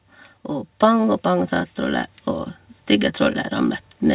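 From 0.49 to 2.2 s, automatic gain rising lifts the speech and its background together by about 6 dB. The slow, shared swell sets it apart from a sudden level step. The narrowband call sound, with nothing above 4 kHz, comes from the call path, not this fault.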